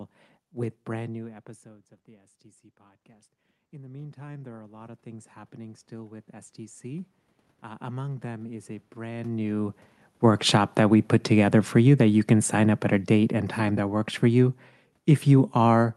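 Automatic gain rising runs from 1.13 s to 6.86 s in this speech clip. Around 1 s the talker moves back from the microphone and the input drops by about 23 dB. The gain control reacts slowly, lifting its gain by about 16 dB over nearly six seconds, so the voice and the room noise behind it swell together rather than the level being restored at once. Because it only recovers part of the drop, the voice stays quieter than before. Automatic gain falling follows from 10.09 s to the end of the clip. Near 9 s the talker moves again. The gain control then pulls its gain down gradually, so the voice sinks steadily along with its background instead of settling straight away. Both swings pass through a call codec whose top end stops near 12 kHz, which fits Opus at about 40 kbps.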